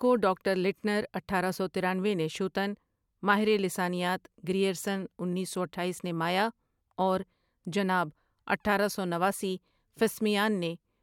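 No technical faults can be heard anywhere in this speech recording. There are no dropouts, glitches or interruptions at any point.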